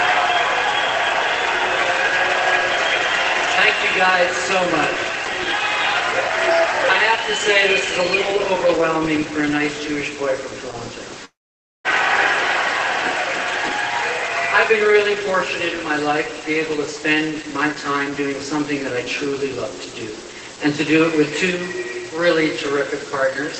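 At 11.25 s the sound suddenly smears into a brief fading buzz, then drops to near silence for about half a second before resuming at 11.87 s, with a piece skipped. This is likely a long network dropout: roughly 0.6 s of audio never arrived, so the receiver stretched the last sound into that decaying tail, then gave up and went quiet until packets returned. The lost portion is simply gone, not replayed late.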